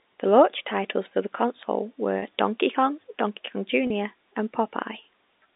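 At 2.19 s and 3.87 s, packet loss with pitch repetition leaves 30 ms gaps, likely one lost packet each, bridged by a repeated pitch period, a brief buzzy hold rather than a silent dropout or click.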